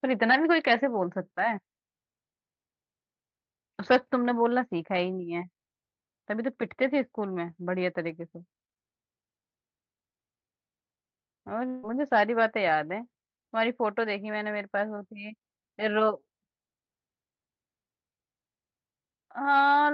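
From 11.67 to 11.85 s the speech smears into a fading buzz and comes back with a chunk gone, likely a long network dropout being concealed.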